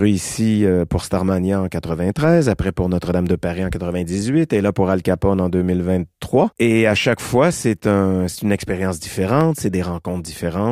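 At 9.41 s a single sharp click sounds. The likely cause is dropped samples: a fraction of a millisecond vanishes, and the waveform jumps.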